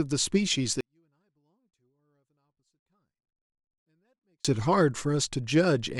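From 0.81 s to 4.45 s the speech collapses by about 48 dB, a 24-bit alignment error (too quiet): 24-bit samples held in the low bytes of 32-bit words are read as full 32-bit values. Unlike a dropout, the faint sound stays clean and continuous, and the drop is instant rather than faded.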